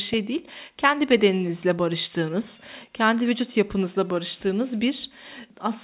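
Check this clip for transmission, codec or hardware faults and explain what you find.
No faults turn up in the speech: it arrives over a normally working call path with nothing above 4 kHz, which fits narrowband G.711 A-law telephone coding.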